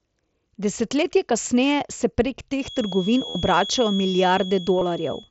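From 2.55 s to the end, a thin feedback whistle at 3.4 kHz sits well below the speech, swelling and fading slowly in level. It is likely a loudspeaker-to-microphone loop hovering at the onset of feedback. Unlike steady electrical interference, it is a single pure pitch that breathes rather than holding rigidly.

Concealed Bluetooth headset packet loss occurs at 3.30 to 3.35 s (52.5 ms, which points to about seven lost frames) and at 4.79 to 4.81 s (22.5 ms, about three frames). The receiver filled each gap by repeating a recent stretch of waveform, so instead of the silence of a plain dropout there is a short buzzy tone at full level, then a small warble as real audio resumes, heard through the headset's band-limited mSBC path.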